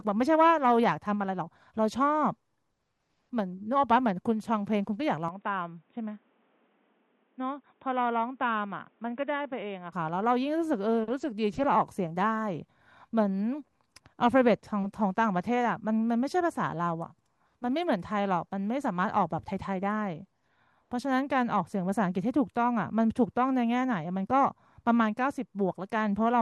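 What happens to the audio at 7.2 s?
At 7.2 s you're inside a stretch from 5.28 to 9.93 s where the speech goes dull and boxy, nothing above 3.8 kHz, a bit quieter, with fresh background noise. That's likely the input switched to a poorer device.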